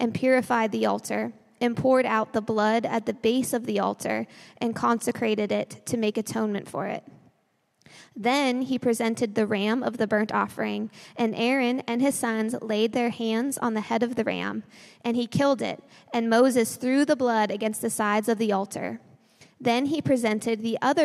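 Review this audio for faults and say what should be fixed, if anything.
No faults turned up in this audio, so nothing needs to be fixed.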